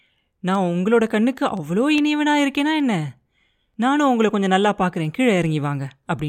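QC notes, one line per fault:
0.14–6.28 s, word clock ticks: around thirty sharp clicks of uneven strength tick through the speech at a steady rate of about one every fifth of a second. The rhythm comes from a digital link read by a device running on its own clock rather than the sender's. The two clocks drift apart by roughly 100 ppm, and each time they slip past each other one sample is dropped or repeated, leaving a brief discontinuity that sounds as a tick.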